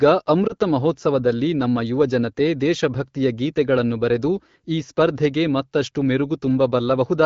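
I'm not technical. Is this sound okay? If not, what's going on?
No. At about 0.47 to 0.53 s, just before "ಮಹೋತ್ಸವದಲ್ಲಿ ನಮ್ಮ ಯುವ ಜನತೆ", there is a lost AMR speech frame. One 20 ms piece of the HD Voice call was damaged, so the phone filled the gap with a guess. That causes a brief dip or warble rather than a hard silent gap or click.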